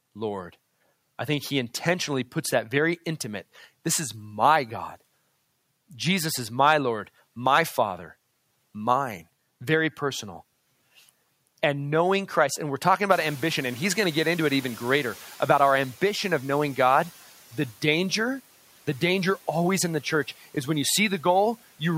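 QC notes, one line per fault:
13.1–15.94 s, noise suppressor catching up: the background noise jumps sharply around 13 s and at first comes through with less reduction, sitting about 23 dB below the speech, then sinks by about 7 dB over roughly 2.84 s. The room noise itself rose abruptly, and the suppressor's running noise estimate could not follow it at once. Until the estimate caught up, it subtracted too little, so the louder noise leaked through before being pulled down.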